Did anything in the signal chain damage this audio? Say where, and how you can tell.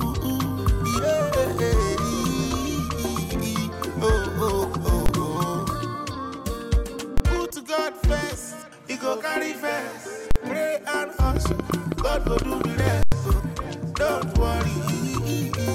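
Yes. Invalid numbers at full scale hit at 5.06, 7.18, 10.31 and 13.03 s. Each is a loud pop-bang lasting 23 to 93 ms, which fits corrupted processing blocks of 1024 to 4096 samples.

A train of clicks runs from 11.37 to 12.88 s. There are about fifteen irregular ticks, roughly 8.6 per second, standing well above the sound. This is likely interference on analogue wiring or a faulty connection or power supply.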